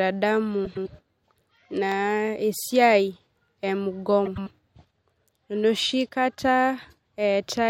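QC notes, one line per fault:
0.65–0.88 s and 4.25–4.48 s, frames out of order: twice, two neighbouring runs of frames reached the decoder in swapped order and were played that way. Each stretch of about 0.23 s has its two halves of roughly 105 ms exchanged, which fits runs of four frames each. The speech there comes out as a garbled flutter. Nothing is dropped, so the timing afterwards stays intact.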